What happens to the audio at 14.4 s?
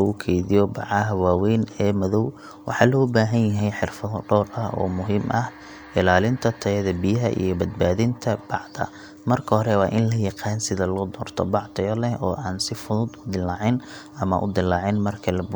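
Nothing goes wrong at 14.4 s: the speech carries on intact through that moment, with no break, distortion or other fault to be heard.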